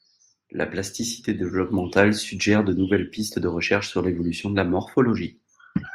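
From 0.49 s to 2.01 s the level climbs by about 4 dB in a smooth ramp: automatic gain rising. The gain control judged the incoming signal too quiet and raised its amplification step by step over roughly one and a half seconds, so the speech and the background noise swell together. On a waveform the envelope widens steadily across that span. On a spectrogram all frequencies brighten at once, including the noise floor between syllables.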